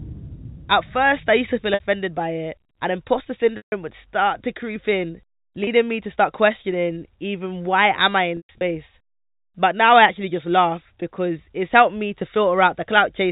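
Packet loss with pitch repetition occurs at 1.74–1.80 s, 3.57–3.72 s (between "by it and imposter" and "would start to creep"), 5.64–5.67 s (after "start to creep in") and 8.37–8.61 s (after "why am I in"). At each gap the receiver replays the last pitch period and fades it out. The 30 and 60 ms losses sound like a briefly held, buzzy tone. The 150 ms loss and the 180 ms spread over 240 ms (longest run 120 ms) fade toward silence before the speech cross-fades back. The telephone-band sound of the G.711 coding carries through around these gaps.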